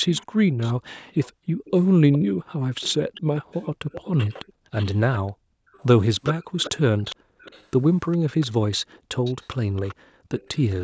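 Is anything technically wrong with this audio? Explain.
Yes, this speech has two related faults.

An echo leak runs from 0.08 to 2.19 s and again from 2.81 s to the end. A faint, delayed copy of the speech trails the original by about 412 ms in the first stretch and 382 ms in the second. It is quiet, roughly 20 dB down at first and around 15 dB down later. The likely cause is a far end on loudspeaker whose echo canceller failed to remove what its microphone caught, so that residue was sent back.

Background gated by the echo canceller appears at 0.27–0.41, 1.34–1.46, 4.53–4.71, 5.33–5.68 and 7.16–7.40 s. In each case the room tone abruptly dips by up to about 40 dB for 0.1 to 0.35 s, then snaps back. This happens when the canceller, reacting to loudspeaker playback, clamps the microphone down hard and releases it once it lets go.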